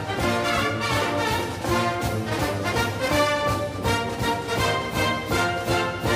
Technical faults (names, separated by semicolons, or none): none